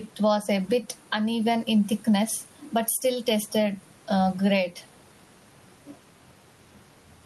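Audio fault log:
Throughout: gain pumping. The room noise sits about 38 dB below the speech, and the gain swings by around 10 dB. The likely cause is input gain set far too high, with a fast limiter pulling down peaks and squashing the dynamics.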